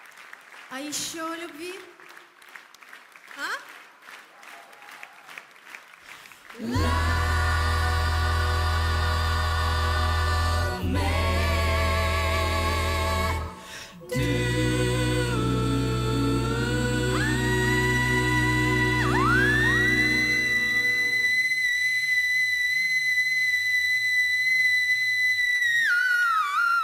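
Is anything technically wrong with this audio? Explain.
Yes. At 25.55 s, near the very end, a burst of packet loss drops about 50 ms of audio. The receiver fills a 47 ms gap by extending and fading the last sound, heard as a brief held buzz or hiss, then playback resumes with that stretch missing.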